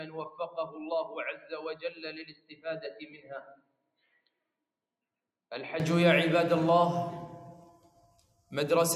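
From the start until 5.8 s the sound is dull, with the level about 10 dB lower. It then opens up with no gap, which points to a likely input switch to a poorer device rather than a filter. Throughout, a speech-tuned noise suppressor applied to music or sounds makes the level swing by roughly 10 dB, pumping held material while attacks pass, unlike a steady compressor. Sound cut by the noise suppressor sinks sustained passages at 0.3–0.78 s, 1.33–1.52 s, 1.74–2.66 s, 2.86–4.28 s and 7.82–8.51 s. The drops reach about 8, 10, 19, 20 and 10 dB, cutting tails rather than clipping onsets as a gate would.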